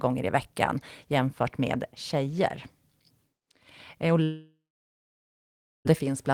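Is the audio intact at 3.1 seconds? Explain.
Yes, at 3.1 seconds the audio is intact, with no dropout, click, distortion or other fault at that moment.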